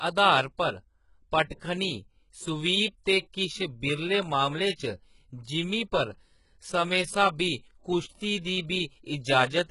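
Throughout, likely HE-AAC compression at a very low bitrate, around 12 kbps, rebuilds the treble by copying lower bands upward. This leaves heavy damage, gritty, lispy sibilants, and nothing above 11.1 kHz.

From 2.41 s to the end, clock drift buffer slips, likely from mismatched device clocks, drop or repeat a small block of samples every 2.43 s, giving about four regular clicks.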